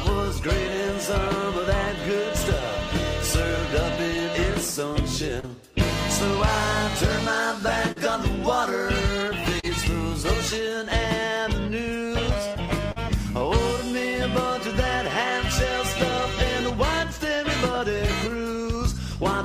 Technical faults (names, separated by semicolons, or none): short concealed packet loss